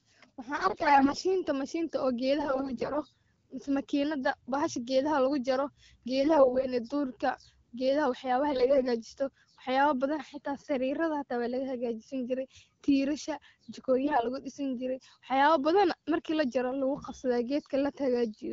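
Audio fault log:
0.56–1.24 s, 2.40–3.03 s, 6.20–6.67 s, 8.52–8.87 s, 14.04–14.26 s: AMR bit errors. The otherwise clear wideband speech turns hoarse and gargly with pitch and level roughly intact, because corrupted low-protection bits misplace excitation pulses and skew the fine parameters.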